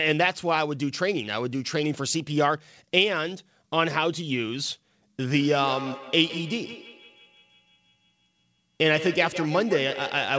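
From 5.34 s to the end, there is feedback echo between two devices. A second device's playback re-enters the first device's microphone. Speech returns roughly every 150 ms, peaking about 12 dB down.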